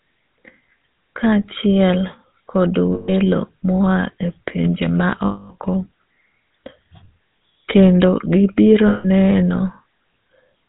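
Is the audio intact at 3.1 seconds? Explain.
No. From 2.94 to 3.10 s, right after "kachiel kod" and just before "mo a e pinje", the sound freezes into a rough, metallic ring. These are lost GSM frames: about 140 ms of damaged data, consistent with seven 20 ms frames, was filled by repeating the last good frame's settings.

Underneath, and at this moment too, the audio carries a buzzy, gravelly roughness with nothing above 4 kHz. This is the GSM full-rate codec at 13 kbps, which models the vocal tract and excites it with sparse, regularly spaced pulses, discarding much of the fine detail.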